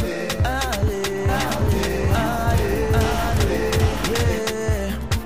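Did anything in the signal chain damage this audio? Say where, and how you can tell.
Yes, a doubled audio track from 1.29 to 4.39 s: a full-band copy trails the sound by about 0.7 s at roughly equal level, with no decay, likely from a second, slower capture path or an edit mixing copies. On a spectrogram, every onset repeats identically, starting and stopping abruptly.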